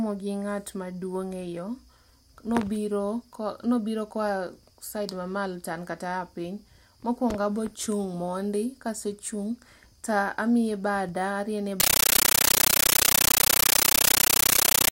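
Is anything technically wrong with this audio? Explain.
Yes. From 11.8 s to the end at 14.91 s, just after "ta amiye bada ariene", the speech is replaced by a compressed stream played as audio. A Dolby Digital (AC-3) bitstream has been treated as ordinary samples instead of being decoded, so each coded frame comes out as a 13.3 ms burst of noise followed by silence, repeating 31 times a second. The result is very loud, chattering static, and the speech is lost under it.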